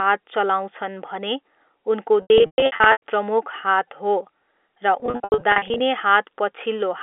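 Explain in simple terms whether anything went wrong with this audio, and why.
Two stretches break up, from 2.22 to 3.02 s and from 5.0 to 5.8 s. This is packet loss with pitch repetition. Chunks of sound went missing. The receiver repeated the last bit to fill each gap, giving a brief buzzy hold, and in longer gaps fading to silence. The telephone-band sound is consistent with ordinary telephone coding.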